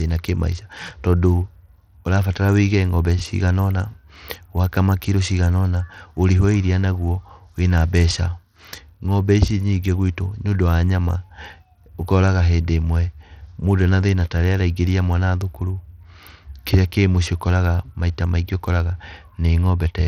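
Speech, and the whole clip carries plainly audible Bluetooth SBC compression damage. The top end keeps dropping out and flickering, with a gritty, grainy noise and some aliasing riding on the voice from start to finish. That's likely an SBC link squeezed onto a small bit pool, which fits roughly 80 kbps. The weak upper sub-bands are starved of bits, so the treble comes and goes, and the rest gets coarsely quantised into that grit.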